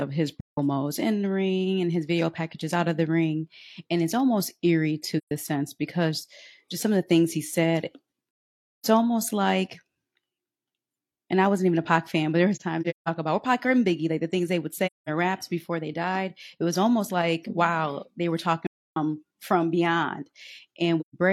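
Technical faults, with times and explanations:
0.41–0.58, 5.17–5.31, 8.44–8.86, 12.55–13.09, 14.86–15.09, 18.67–18.97 and 21.00–21.14 s: AAC frame loss with muting. Lost AAC frames were decoded as zeroed spectrum, so overlapping windows fade the speech out and back in, leaving soft-edged silent holes. The 8.44 s gap runs about half a second, and 12.55–13.09 s breaks into several short holes.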